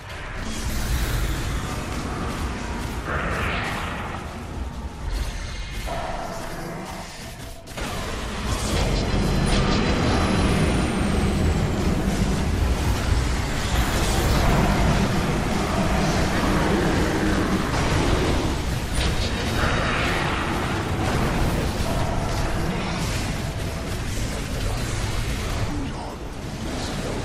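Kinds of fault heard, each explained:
repeated buffer: new audio arrived late three times, so the device replayed the last 20 ms buffer once, causing brief click-like stutters at 11.64, 14.72 and 17.36 s.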